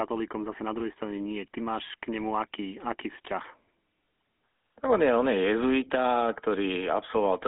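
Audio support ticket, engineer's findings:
GSM full-rate codec damage, throughout. Buzzy, gravelly roughness on the speech, plainly audible. Nothing above 3.8 kHz, band roughly 250 Hz to 3.5 kHz, consistent with a 13 kbps GSM full-rate leg. Cause: coarse pulse excitation driving a vocal-tract model. Unlike plain band-limiting, which only dulls the speech, this adds grit inside the passband.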